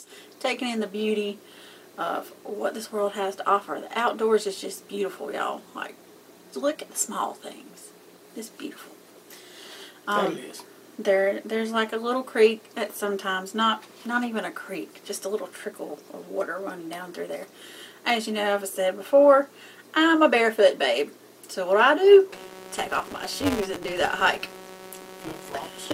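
From 22.3 s to the end at 25.9 s, a steady buzz at about 188 Hz rides on the sound, tracking its level. This is a filter restarted on every block: its memory resets each block, starting from silence, and each restart leaves a small transient. The rate fits a 256-sample block.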